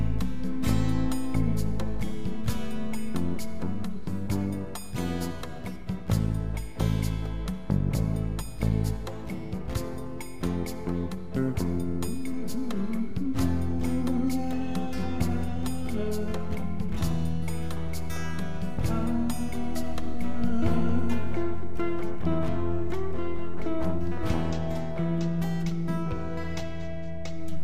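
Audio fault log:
No faults turn up anywhere in this recording. Nothing heard in the audio calls for an entry in this log.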